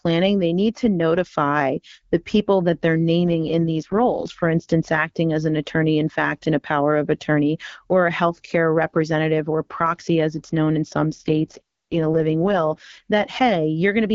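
After "the people that they're", from 3.18 to 4.30 s, and again after "it's known in some", from 11.15 to 13.00 s, the speech turns rough, buzzy and synthetic in an AMR rate drop. The roughness fits the AMR-WB codec falling from 12.65 to 6.6 kbit/s, trading detail for error protection. A spectrogram keeps the same wideband ceiling and shows no gap in the waveform, but the harmonic lines blur into grainy, noise-like texture until clarity returns.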